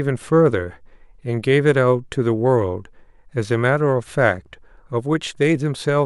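A speech recording in which no technical faults can be heard anywhere in the signal.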